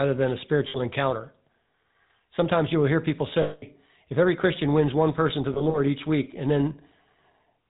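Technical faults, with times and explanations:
Throughout, GSM full-rate codec: the speech was squeezed through the original GSM coder, which fits a 13 kbps stream. It models the vocal tract and excites it with a sparse, regularly spaced pulse train built from only every third sample, and it discards everything above 4 kHz. The result is a dull, band-limited sound with a plainly audible buzzy, gravelly roughness laid over every syllable.
0.68–0.78 s, 3.42–3.63 s and 5.54–5.78 s, lost GSM frames: at each point the decoder received bad frames and filled the gaps by reusing the last good frame's settings. After "than a" it bridges about 60 ms. After "you will hear people" it bridges about 200 ms before "if every". After "wins one person to", about 100 ms of losses are scattered over 200 ms, each run no more than roughly 40 ms, before "each week and". Each gap sounds like a rough, metallic ring.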